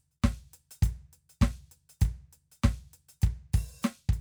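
No technical faults in this music.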